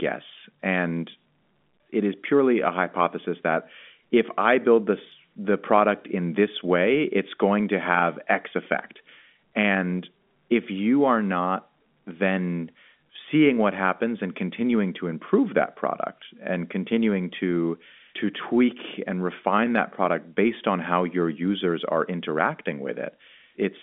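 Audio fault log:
Nothing stood out on listening to this speech, which comes through the G.711 telephone line band as expected.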